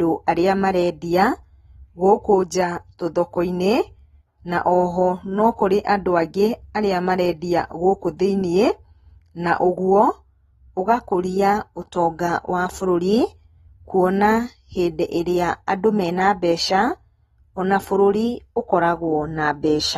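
Likely AAC compression at a low bitrate, consistent with AAC-LC at around 32 kbps, runs through the whole of this speech recording. With so few bits to spend on each frame, the encoder discards everything above about 12.4 kHz and quantises the remaining bands coarsely. The damage is plainly audible: the speech sounds dull and smeared, its sibilants turn fizzy, and sustained sounds take on a warble from start to finish.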